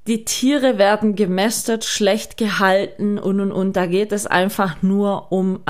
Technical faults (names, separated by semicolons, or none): none